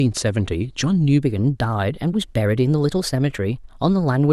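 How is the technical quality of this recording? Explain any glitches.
The recording has one fault. From 1.22 s to the end there is a wrong sample rate. The speech runs 1.09 times fast and about 1.47 semitones high, which fits 44.1 kHz audio played at 48 kHz without conversion.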